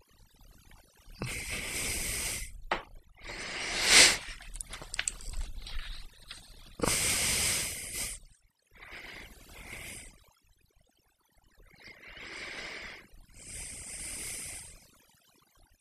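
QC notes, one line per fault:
throughout: overdone noise removal. The noise reduction was pushed too hard, so any frequency band sitting close to the noise estimate gets pulled right down. Quiet bits of the speech vanish with it, leaving near-silent gaps full of twinkly specks.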